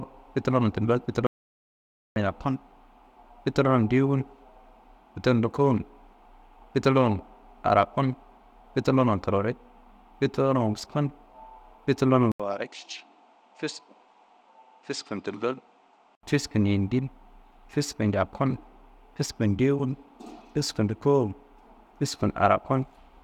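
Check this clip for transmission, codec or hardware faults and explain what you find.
Two faults are audible: a dropout to silence near the start and a stretch where the speech comes through a poorer input.

From 1.27 to 2.16 s there is an audio dropout to silence lasting about 0.9 s. The speech stops abruptly and resumes just as abruptly, and the gap is silent with no room tone. The likely cause is the input path briefly failing, through a lost link or a momentary mute, while the recorder kept writing samples. Whatever was spoken in that interval is gone.

From 12.32 to 16.23 s the sound behaves as if the input switched to a poorer device. The switch opens with a silent gap of about 80 ms. After it, nothing reaches above 9 kHz, so the speech sounds duller and boxier, and the level falls by roughly 5 dB. A new noise floor appears about 45 dB below the speech. Together these point to a likely change of capture device with its own band limit, gain and self-noise. 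At 16.23 s the fuller sound returns.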